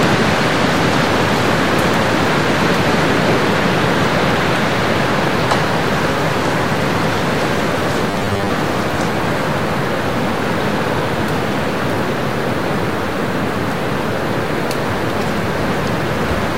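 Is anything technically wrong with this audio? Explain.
Yes, there's one fault. From 8.11 to 8.50 s you get a robotic sound from repeated short buffers. Fresh audio likely wasn't arriving often enough, so playback kept looping the last chunk, with roughly half of what you hear being repeats while the real material got skipped. The loop rate puts a fixed 100 Hz buzz on everything, which fits a chunk about 10 ms long. The sound goes rigid and metallic there, only loosely tracking what's underneath.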